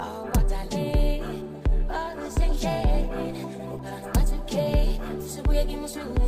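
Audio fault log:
2.22–5.23 s, block size mismatch (truncated): a steady buzz at 100 Hz sits on the sound for those three seconds. One stage is handing over blocks a bit longer than the next stage takes in, so the tail of each block gets dropped, and that regular chop is what you hear as the buzz. The trimmed portion is tiny, so the audio keeps essentially its normal speed and pitch.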